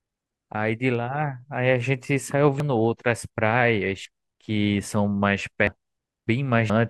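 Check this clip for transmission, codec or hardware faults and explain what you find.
The speech contains compressed frames skipped at 2.60, 4.05, 5.67, 6.27 and 6.70 s. At each point the sound jumps forward, dropping about 0.4 s, 0.15 s, 1 s, 1 s and 0.4 s of material. Those jumps fit whole frames of roughly 85 ms going unplayed because they were missing or rejected by the decoder. Unlike a packet dropout, there is no gap of silence.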